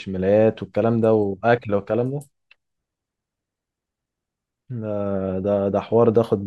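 No technical faults are audible anywhere in the recording.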